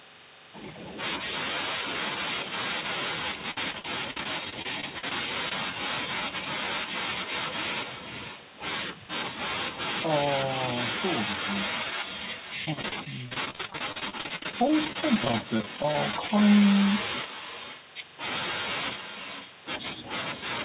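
Speech carried over a call link that passes nothing above 4 kHz suffers from echo with no canceller throughout. The far end's microphone picks up its own loudspeaker, so every phrase returns about half a second later as a thinner copy about 9 dB quieter. Repeated packet loss (robotic sound) strikes from 3.51 to 5.12 s and again from 12.65 to 16.30 s. Packets keep going missing, holes of up to about 55–58 ms are patched by extending the previous sound, and roughly a fifth of each stretch turns choppy. Short concealed packet loss at 5.49–5.52 s fills a 20 ms hole with continued sound, leaving a brief smear or wobble.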